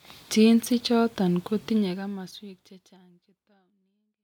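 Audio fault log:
No fault is found in this audio.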